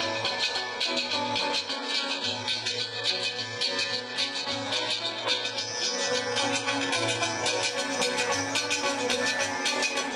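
The audio drops abruptly, without a gap, to an adaptive stream at a lower bitrate from 1.7 to 7.7 s: artefacts rise, nothing above 11.1 kHz remains, consistent with a roughly 12 kbit/s HE-AAC rendition.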